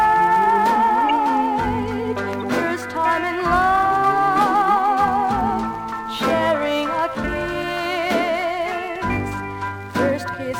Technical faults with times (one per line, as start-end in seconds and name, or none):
1.09 corrupt frame decoded
2.40-2.48 corrupt frame decoded